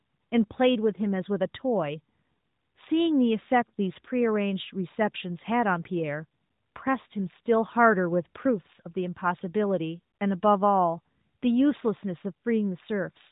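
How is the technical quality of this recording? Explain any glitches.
No glitches or technical faults can be heard here.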